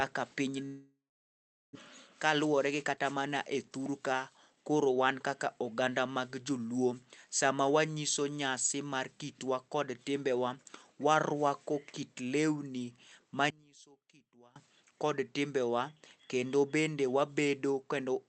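A long network dropout runs from 0.65 to 1.77 s. The last sound is stretched into a fading buzz before about 0.73 s of near-silence, and roughly a second of speech never returns. The likely cause is packets that stopped arriving for over a second.

A jitter buffer speed-up follows from 1.85 to 3.12 s, just before "mana e thur ka". Having built up about 70 ms of extra delay, the receiver trims short pitch-period slices repeatedly, so speech runs 6% faster at unchanged pitch and sounds slightly hurried.

One channel inverted affects 13.50 to 14.56 s, between "warwako kit lweni" and "kod timbewa". Heard in mono, the centred speech collapses by about 25 dB into a faint residue, likely because one stereo channel's polarity was flipped so the shared content cancels when summed.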